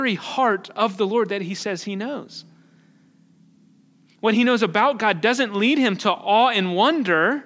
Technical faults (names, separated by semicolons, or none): none